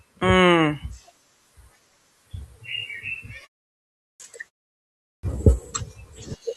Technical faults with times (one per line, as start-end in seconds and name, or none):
3.70-4.20 clipped start after a pause
4.73-5.23 clipped start after a pause